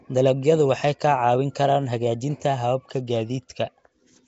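Throughout the speech recording, a rough, hissy halo clings to the voice and everything sounds smeared and underwater, with nothing above 7.8 kHz. The likely cause is Nellymoser compression, Flash's old Asao microphone codec, at a rate that fits about 32 kbps. It codes short blocks with a fixed, small bit budget, so weaker bands receive no bits and are filled with noise, producing the hiss and the blurred detail heard here.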